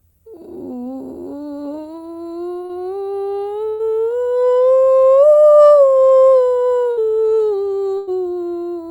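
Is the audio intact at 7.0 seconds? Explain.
No, it's just coming out of a burst of packet loss from 6.91 to 6.99 s. A run of music packets went missing, so the receiver stretched the last sound and faded it down for roughly 60 ms, then picked up further on with that bit gone.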